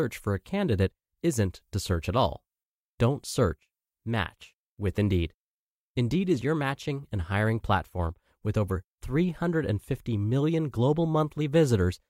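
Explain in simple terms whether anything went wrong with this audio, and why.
Nothing went wrong here: the speech signal stays steady and intact throughout, with no technical faults to be heard at any point.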